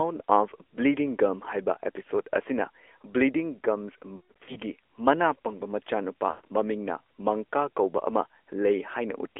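Throughout, the speech carries AMR narrowband mobile codec damage. The band runs only from about 300 Hz to 3.4 kHz, and the vocal-tract model plus sparse pulse excitation leaves a plainly buzzy, synthetic edge, consistent with a mid-rate mode around 10 kbps.

From 4.16 to 4.58 s, lost AMR speech frames are scattered across roughly 400 ms, totalling about 260 ms of loss with a longest run of 140 ms. The decoder repeats its last pitch and filter settings at falling gain, so the sound smears, warbles and fades, then returns rough. From 6.30 to 6.45 s, a 140 ms run gives the same drawn-out decay toward silence.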